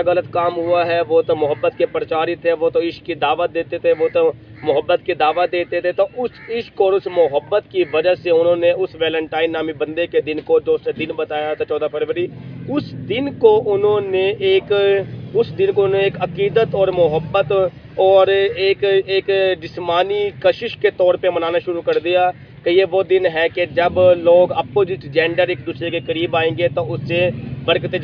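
No technical faults can be heard anywhere in this audio.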